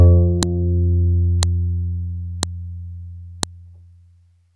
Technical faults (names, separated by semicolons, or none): file header played as audio